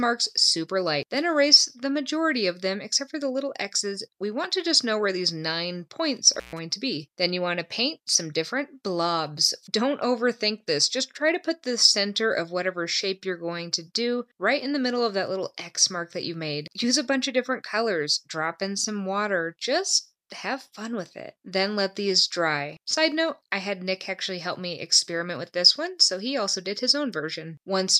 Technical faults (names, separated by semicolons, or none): intermittent contact